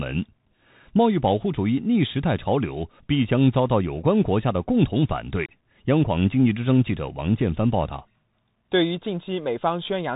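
Speech, carried throughout by the Bluetooth CVSD headset codec, with plainly audible damage. Nothing above about 3.8 kHz survives, giving the narrow, telephone-like band. CVSD codes each sample as a single up-or-down bit with an adapting step size, consistent with a 64 kbps link. Loud high-frequency content outruns that step and distorts, s sounds come out scratchy, and a granular hiss sits beneath the speech for the whole clip.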